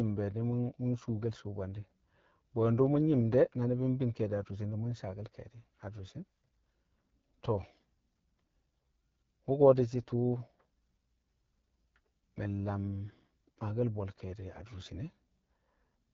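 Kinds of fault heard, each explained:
AMR wideband (HD Voice) codec: The speech was squeezed through the AMR-WB coder at one of its lowest rates, and the sound fits the 8.85 kbit/s mode. Below 6.4 kHz the voice is rebuilt from a vocal tract model driven by coarse pulses, and above that only shaped noise fills the band up to 7 kHz. The result here is a clearly audible rough, raspy texture throughout the speech.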